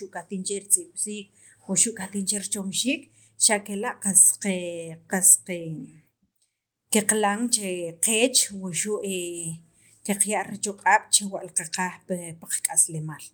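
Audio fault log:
No fault is logged for this speech audio.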